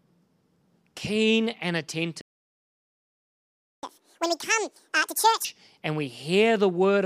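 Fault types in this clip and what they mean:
Playback stall: The speech cuts to silence at 2.21 s and stays silent until 3.83 s, a gap of about 1.6 s. The player likely ran out of data or had its thread blocked. The sound then continues from where it stopped.
Catch-up at higher speed: From 3.83 s to 5.45 s the speech runs at double speed. The player is resampling to clear its backlog and recover the lost time. Pitch rises with it, by roughly ten semitones. Both return to normal at 5.45 s.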